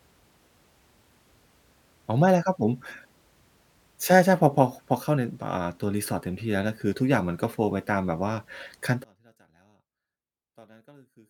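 From 9.04 s to the end, the speech drops by about 34 dB and turns faint and distant, with the centred body of the sound nearly gone. That's most likely one channel inverted: one side of the stereo pair has flipped polarity, so when the two are summed to mono, everything they share cancels out. What's left is only the small difference between the channels, which comes through as a faint trace.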